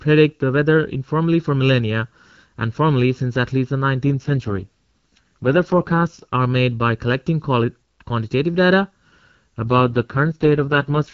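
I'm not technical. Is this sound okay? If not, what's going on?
No. There is channel delay (comb filtering) throughout. One channel lags the other by under a millisecond, so combining them cancels certain tones. The speech sounds hollow and phasey.

There are also two AMR rate drops, from 4.09 to 6.25 s and from 9.64 s to the end. The phone network switched to a lower quality setting. The speech turns rough and synthetic.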